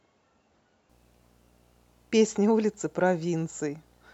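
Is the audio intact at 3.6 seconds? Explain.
No. Video or display buzz runs from 0.89 s to the end. A screen or video cable couples in a faint 60 Hz field-rate buzz with hash above it.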